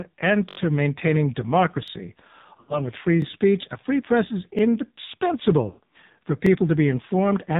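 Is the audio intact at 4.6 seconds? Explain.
No. A repeated buffer sounds at 4.59 to 4.61 s, right after "a free press is". Fresh audio did not reach the output in time, so the last chunk of about 21 ms, which fits a 1024-sample buffer, played a second time before playback moved on. Because the chunk is so short, the doubling comes across as a brief click or buzz rather than a clear stutter, with a hard join at the repeat. Almost no audio is skipped.

The AMR narrowband mobile codec also affects this moment, as it does the whole clip. At 5.9 kbps the codec rebuilds the speech from a coarse vocal-tract model driven by a few pulses per 5 ms subframe, so the sound here is heavily buzzy and synthetic, and nothing above 4 kHz survives.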